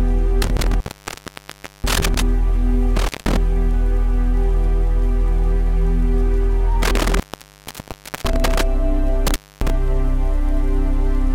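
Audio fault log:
0.42–2.22 s, 2.96–3.37 s, 6.82–8.62 s, 9.27–9.70 s: intermittent contact. A loose plug or cable connection repeatedly breaks and remakes the signal path, so the sound cuts out for about 1.04 s, 0.18 s, 1.05 s and 0.26 s. Scratchy crackle marks each opening and closing as the contact chatters, and faint hiss remains while the line is open. That crackle and hiss, with gaps of uneven length at uneven times, separates it from a clean digital dropout, which falls to true silence with abrupt, uniform edges.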